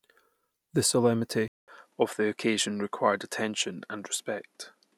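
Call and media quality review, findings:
Speech turns dull from 1.48 s to end, nothing above 12 kHz, after a 200 ms dropout. Likely input switched to a poorer device. Level unchanged. Fresh noise floor about 45 dB down plus the gap rule out a codec bandwidth drop.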